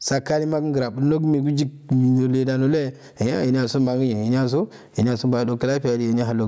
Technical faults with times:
0.00-6.47 gain pumping

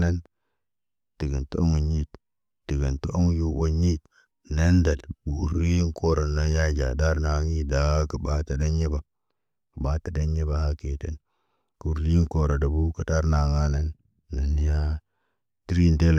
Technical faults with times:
none

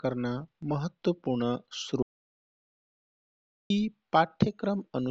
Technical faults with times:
2.02-3.70 audio dropout to silence

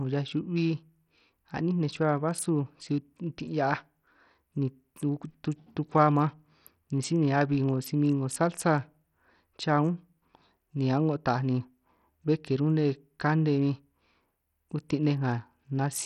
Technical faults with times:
0.00-16.05 Bluetooth SBC compression

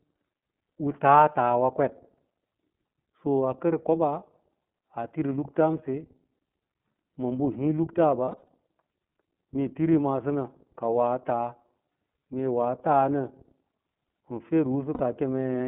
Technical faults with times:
0.00-15.68 iLBC codec
8.25-8.48 lost iLBC frames
14.94-15.01 lost iLBC frames

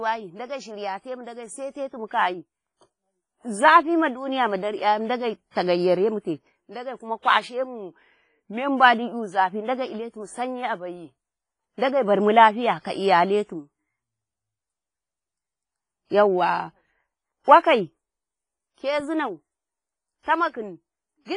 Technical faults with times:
0.00-21.36 WMA compression
5.51-5.55 pre-echo
20.23-20.26 pre-echo

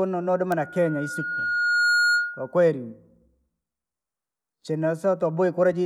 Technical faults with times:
0.59-2.56 loudspeaker feedback squeal

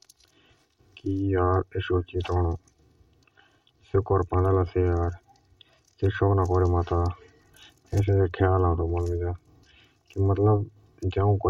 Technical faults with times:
0.00-11.49 channel delay (comb filtering)

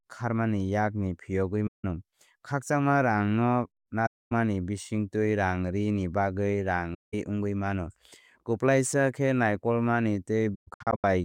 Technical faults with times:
1.67-1.85 AAC frame loss with muting
4.06-4.32 AAC frame loss with muting
6.94-7.14 AAC frame loss with muting
10.54-11.04 AAC frame loss with muting

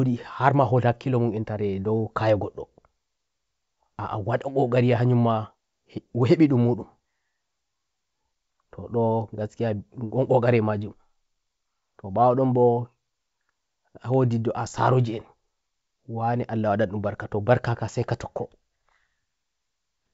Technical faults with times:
none

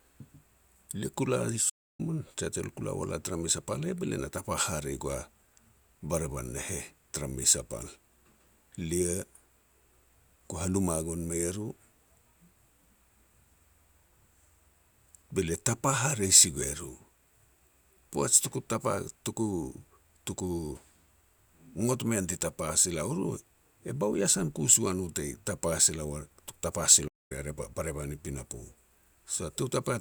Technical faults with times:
1.69-2.00 playback stall
27.07-27.32 playback stall

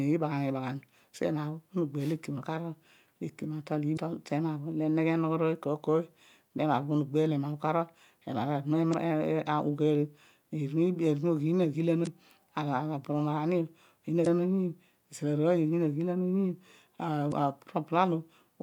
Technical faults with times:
3.93-3.98 damaged data in a compressed stream
8.90-8.94 damaged data in a compressed stream
12.03-12.08 damaged data in a compressed stream
14.23-14.27 damaged data in a compressed stream
17.28-17.33 damaged data in a compressed stream

